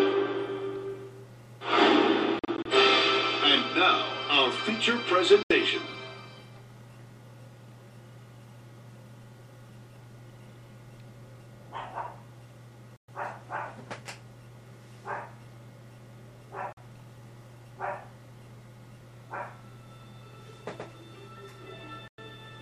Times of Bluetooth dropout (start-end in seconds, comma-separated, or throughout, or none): 2.39-2.66, 5.43-5.51, 12.96-13.08, 16.73-16.77, 22.08-22.18